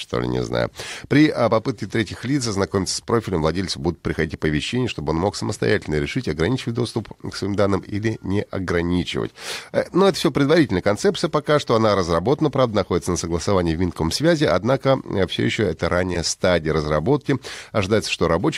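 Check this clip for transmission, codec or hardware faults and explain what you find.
Two short dropouts of lost LE Audio frames. At 0.87 s, after "ли не знаю", and at 16.14 s, between "э все еще это" and "стадия разработки", about 15 ms of the Bluetooth LE Audio stream went missing, which fits two 7.5 ms frames. The LC3 decoder concealed each gap by replaying the last good spectrum with randomised phase signs. Each gap is too brief for the fade-out to take hold, so the speech briefly turns into a noisy smear. The light codec compression beneath this adds at most a faint watery texture.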